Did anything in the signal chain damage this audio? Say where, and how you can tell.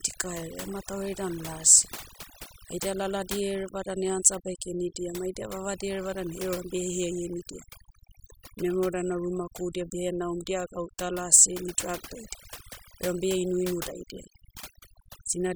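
Yes: overdone noise removal in the call processing runs throughout. Gaps fall to near silence with twinkling specks, and quiet parts of the speech are gated away along with the noise bands.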